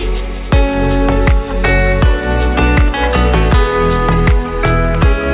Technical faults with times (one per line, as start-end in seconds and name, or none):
none